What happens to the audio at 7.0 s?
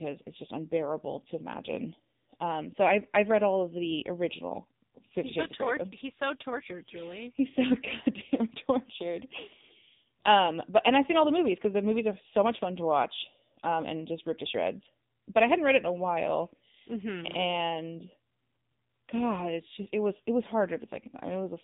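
At 7.0 s the speech carries the AMR narrowband mobile codec damage present throughout: nothing above 3.8 kHz, and a buzzy, synthetic vocal-tract rendering consistent with a low bitrate near 6.7 kbps.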